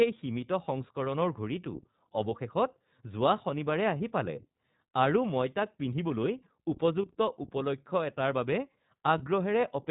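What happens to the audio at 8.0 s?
At 8.0 s the speech carries the damage of the iLBC codec, which runs through the whole clip rather than starting there. The sound is plainly degraded. It is narrowband, with nothing above 4 kHz, so it sounds dull and telephone-like. The codec rebuilds each short frame on its own, without drawing on the one before. The result is a rough, slightly synthetic texture. That fits 20 ms frames at about 15.2 kbps.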